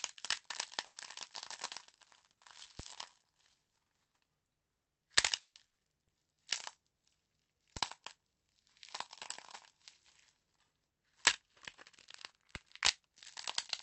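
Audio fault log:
0.85–0.99 s and 5.40–5.58 s, call audio freeze: The last sound is drawn out into a fading buzz, dropping to silence for about 30 ms and then 90 ms, before the sound resumes where it left off. Nothing is lost, but playback ends up 110 ms and then 150 ms later. The likely cause is packets held up in transit that drained the jitter buffer.
2.80–7.77 s and 12.56 s to the end, DC step: A low thump at 2.80 s, another at 7.77 s and a third at 12.56 s, while the sound itself carries on unchanged. The waveform's zero line jumps to an offset and holds it. The first offset steps back at 7.77 s, and the second lasts to the end of the clip.
5.67–5.79 s, skip ahead: Playback jumps forward with almost no gap. Roughly 200 ms of sound is missing, and the two sides are spliced together through a 90 ms bridge. Later audio was already waiting, so a stretch was dropped, cutting the delay by about 100 ms.
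6.05–6.36 s, jitter buffer slow-down: The sound is stretched to about 81% speed at unchanged pitch, with a drawn-out quality. The receiver repeated short pitch-period-sized pieces many times, adding 69 ms to rebuild a low buffer reserve.
10.92–11.50 s, jitter buffer speed-up: The sound runs slightly hurried, at about 106% speed, with its pitch unchanged. Audio had piled up in the jitter buffer, so the receiver trimmed many short pieces, roughly 40 ms in total, to bring the delay back down.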